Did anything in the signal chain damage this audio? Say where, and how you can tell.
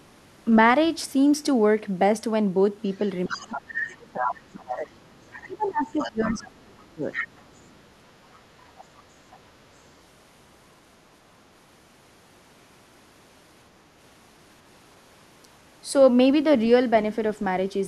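Yes. A second, weaker voice sits under the speech from 2.93 to 4.76 s, 5.32 to 6.51 s, 7.13 to 7.8 s and 8.33 to 9.39 s. It runs about 10 to 15 dB below the main talker in the first three stretches and fades to a faint trace, about 30 dB down, in the last. This is the other side's voice leaking through, likely at the call-processing stage: the far end played from a loudspeaker and the echo canceller left residual echo in the microphone feed.

Between 3.27 and 7.04 s the talker's own level sinks. At its deepest it drops by roughly 25 dB, and the losses add up to about three seconds. That pattern is speech suppressed in double talk, again likely call processing. With both sides active at once, the canceller's suppressor could not tell the near talker from the echo and attenuated everything it picked up.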